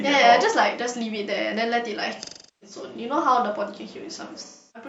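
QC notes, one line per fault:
2.23–2.76 s and 4.44 s to the end, AAC frame loss with concealment. Frames drop out and the decoder rebuilds the gap from the last good spectrum. The first gap lasts about 0.38 s.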